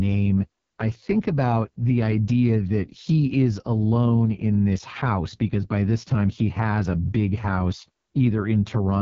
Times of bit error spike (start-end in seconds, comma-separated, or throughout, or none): none